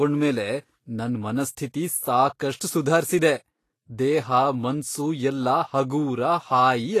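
From start to finish, the speech carries plainly audible damage. Nothing sounds above 14.2 kHz. The treble is hissy and grainy, as if fine detail had been swapped for noise of similar energy. Tones sound roughened. Consonant attacks are blurred. The likely cause is Vorbis compression at low quality. The encoder lowered its cut-off and quantised the upper residue coarsely over its spectral floor. The degree of damage fits a bitrate of around 34 kbps.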